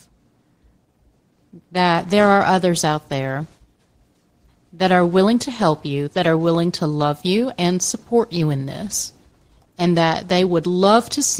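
Throughout the speech there is a faint unsteadiness, as if the pacing drags in small lurches. This is clock drift between sender and receiver: the sender's clock runs roughly 1.5 percent slow, so the receiver's jitter buffer keeps draining and the stream falls behind.

From 0.37 s to 10.85 s, slight hiccups recur at uneven intervals and the delivery sounds marginally slowed, at 98 percent speed. These are repeated timing corrections: the receiver repeats short pieces to cover the shortfall, stretching the stretch by about a fifth of a second overall.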